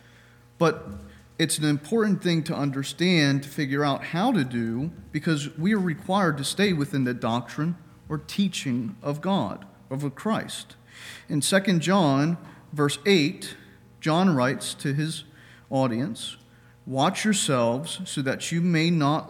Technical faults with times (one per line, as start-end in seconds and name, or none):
none